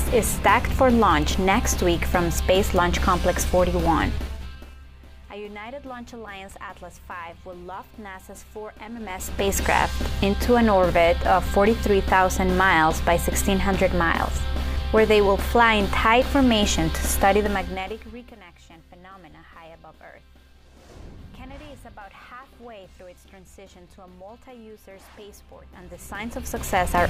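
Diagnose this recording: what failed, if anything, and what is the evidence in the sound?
Zipper noise from a stepped gain stage at 17.37 to 18.39 s. The level falls by roughly 25 dB in unsmoothed 2 dB steps, about ten per second, each ticking audibly.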